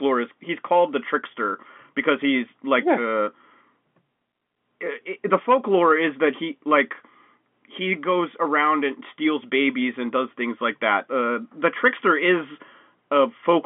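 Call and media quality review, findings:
No findings: speech carried in the expected G.711 narrowband, 200 Hz to 3.4 kHz line band with nothing above 3.6 kHz, which fits a 64 kbps mu-law leg.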